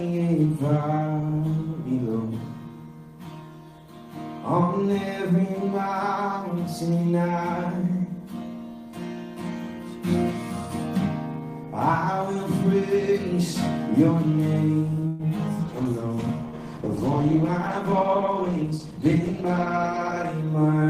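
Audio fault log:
15.07–15.22 s, call audio freeze: a 0.12 s fading fill stretches the sound, likely from the jitter buffer running empty; the waveform shows a decaying smeared tail, then the sound resumes with nothing lost.
15.61–20.41 s, call bitrate drop: the encoder falls from 32 to 14 kbps, so the sound turns coarse and muffled; the spectrogram's upper band goes dark and blotchy.
17.25–19.25 s, jitter buffer speed-up: the sound runs about 6% faster at unchanged pitch as around 150 ms of short pitch-period slices are cut; the waveform looks slightly compressed in time.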